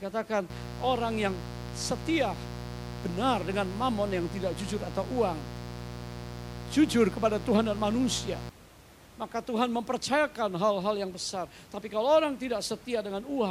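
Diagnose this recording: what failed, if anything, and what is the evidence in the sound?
Mains buzz runs from 0.50 s to 8.50 s, a problem in the analogue wiring. A steady, raspy buzz sits under the speech, loud at roughly 10 dB below it, and stops abruptly at 8.50 s. Its rasp comes from sharp switching spikes, twice per cycle of 60 Hz mains, entering through a dimmer, rectifier or unshielded cable, which fill the spectrum with harmonics up to several kHz. The faint room noise beneath is part of the original recording.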